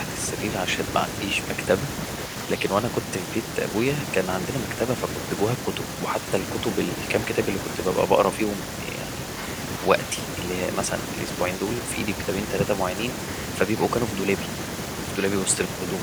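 Speech recording, no technical faults detected anywhere in the clip.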